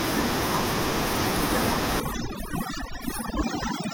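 From 2.0 s to the end, overdone noise removal takes over. A noise reduction stage set far too aggressively shuts off individual frequency bands whenever they sit near its idea of the background. The room noise, which before that point lay about 25 dB beneath the speech, drops and breaks up into twinkling, warbling specks. The softer parts of the voice are cut away along with it.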